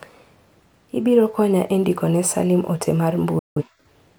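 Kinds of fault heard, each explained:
Digital broadcast dropout: the receiver stopped getting usable frames, through signal loss or failed checksums, and muted its output until valid frames resumed. In this speech clip the sound fades out over about 3 ms at 3.39 s, leaving a near-instant cut, then stays silent until 3.62 s. About 170 ms of programme appears to be missing, which fits a handful of consecutive lost frames, and whatever was sent during that gap is simply gone.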